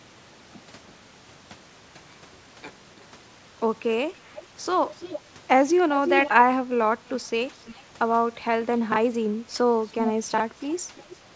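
Echo leak at 4.35, 4.96, 6.05, 7.65, 10.05 and 10.96 s: a faint-to-strong copy of the speech returns about a third of a second later, drifting from 331 to 347 ms, likely from a loudspeaker echo canceller letting some of its microphone pickup through, over a call path that carries nothing above 8 kHz.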